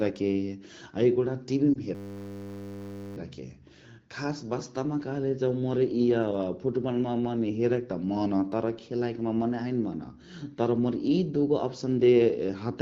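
A brief dip or warble in the speech between 1.74 and 1.78 s marks a lost AMR speech frame. A single 20 ms frame failed its check, so the decoder bridged the gap by repeating the previous pitch and vocal tract settings at reduced gain.

From 1.95 to 3.17 s the sound freezes into a steady buzz at 100 Hz. This is a system hang loop. While the system stalled, the audio hardware kept replaying one 10 ms buffer over and over, and when playback resumed, little or nothing seems to be missing.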